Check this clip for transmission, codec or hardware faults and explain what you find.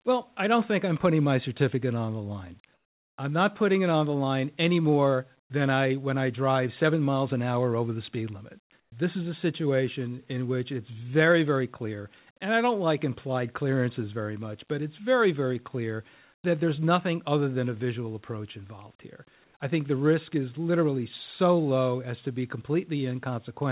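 One transmission fault recurs four times, heard over a call path whose audio stops at 4 kHz, which fits a G.711 narrowband codec.

Comfort noise in place of the background: at 2.74–3.18 s, 8.80–8.92 s, 16.34–16.44 s and 19.44–19.54 s, the real background in the pauses gives way to a flat, featureless hiss, about 11, 12, 5 and 4 dB quieter respectively. This is likely discontinuous transmission, with the receiver filling the silence with synthetic noise.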